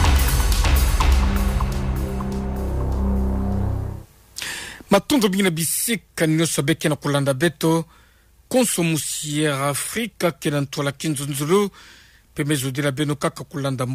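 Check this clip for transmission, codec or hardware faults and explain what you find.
Nothing wrong turned up anywhere in the recording.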